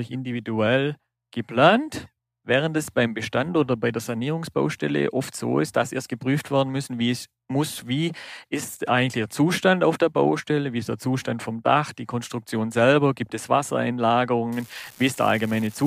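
From 14.52 s to the end at 15.87 s, an unreliable data bit appears: one marginal data line flips its bit in a random share of samples, each error adding an identical spike of about -26 dBFS. This produces a steady crackling fizz under the speech that continues through pauses.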